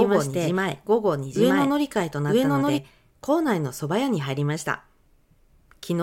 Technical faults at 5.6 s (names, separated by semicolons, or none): none